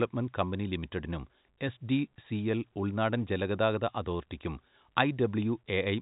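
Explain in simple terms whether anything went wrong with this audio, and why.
Nothing went wrong with this audio; it simply has the narrow sound of an ordinary telephone line.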